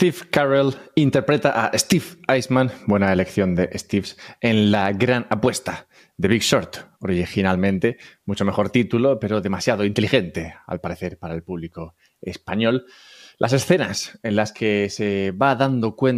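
Listening to the speech recording, nothing technical stood out.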